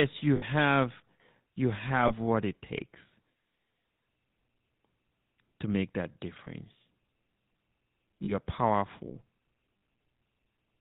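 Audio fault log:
throughout: GSM full-rate codec. Nothing above 4 kHz survives. Sparse pulse excitation makes the speech plainly buzzy and gravelly, which fits a 13 kbps stream.
0.36–0.44, 2.08–2.13, 6.44–6.48, 8.24–8.32, 9.78–9.82: lost GSM frames. Gaps of 60, 20, 20, 40 and 40 ms are filled by repeating the last good frame, which produces a brief metallic ring.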